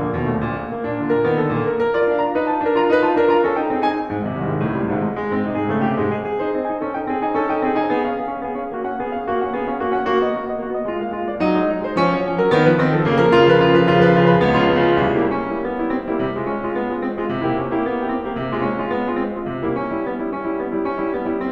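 The music arrives intact, with no dropouts, glitches, distortion or level problems anywhere in the signal.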